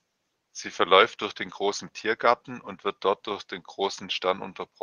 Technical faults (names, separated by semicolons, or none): none